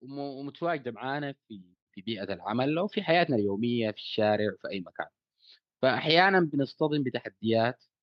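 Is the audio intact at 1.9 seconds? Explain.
No. At 1.9 seconds the clip is partway through an automatic gain rising fault that runs from 0.05 to 3.36 s. The gain control judged the incoming speech too quiet and kept turning its gain up step by step, about 12 dB in all across that span. Because the boost applies to everything, the voice and the background noise swell together, so at 1.9 s the level is still climbing rather than holding steady.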